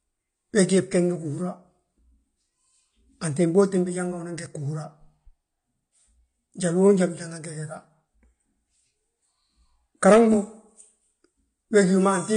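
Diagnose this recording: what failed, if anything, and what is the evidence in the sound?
The codec stage failed: the speech sounds dull and smeared throughout, with plainly audible AAC compression damage. A spectrogram shows nothing above 9.7 kHz, pointing to AAC-LC at a low bitrate, likely about 32 kbps, starving high frequencies.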